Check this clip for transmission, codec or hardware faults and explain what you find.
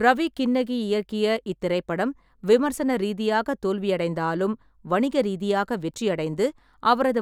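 No transmission, codec or hardware fault can be heard in this speech recording.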